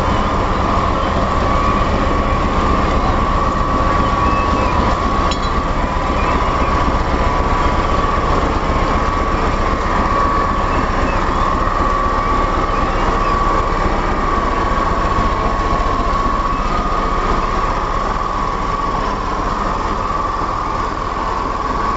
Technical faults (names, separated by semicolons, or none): none